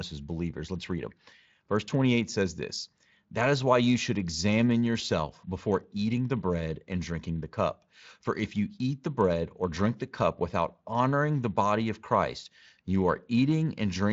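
No faults heard in this speech; the Speex coding behaves as that codec normally does at its setting.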